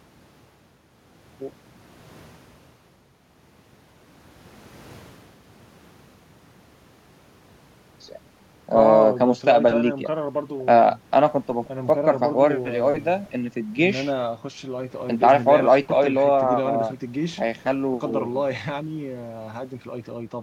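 The speech recording shows no technical fault anywhere in its duration, with the signal continuous and steady throughout.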